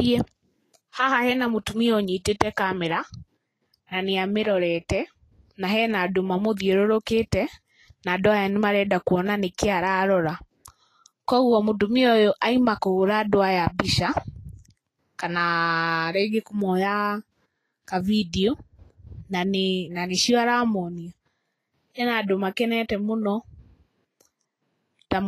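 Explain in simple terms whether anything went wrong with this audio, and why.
Something did go wrong, for the whole clip. The speech sounds hissy and grainy, and sharp sounds are smeared. Nothing is heard above 14.2 kHz. This is likely Vorbis compression. Squeezed too hard, the fine treble detail was replaced with noise.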